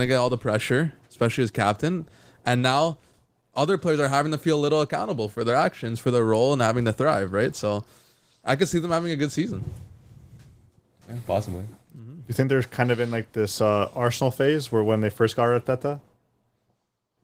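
Nothing's amiss in this speech recording, which is simply riding on Opus voice compression, with the full audio band kept and only a light codec touch that fits hybrid-mode coding at around 20 kbps.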